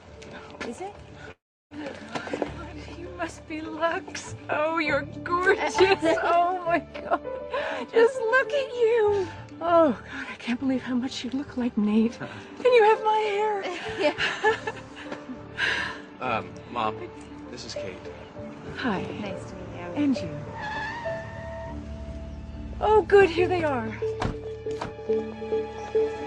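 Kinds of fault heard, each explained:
Long network dropout: from 1.31 to 1.74 s the sound collapses into a fading buzz or hiss, then 340 ms of near silence, before audio resumes with 400 ms missing. A brief packet-loss glitch would be a short click instead. Here a network stall likely lost the audio.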